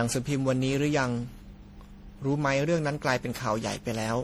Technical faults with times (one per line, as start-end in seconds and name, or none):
0.00-4.23 generation loss